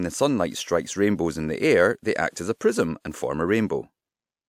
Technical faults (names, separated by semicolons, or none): pre-echo